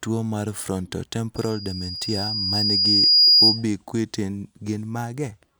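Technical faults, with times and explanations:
1.36 to 3.64 s, loudspeaker feedback squeal: a 4.9 kHz tone swells over about two seconds to roughly 15 dB above the speech. Microphone and loudspeaker form a runaway loop.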